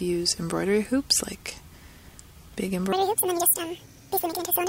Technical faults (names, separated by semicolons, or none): section at the wrong speed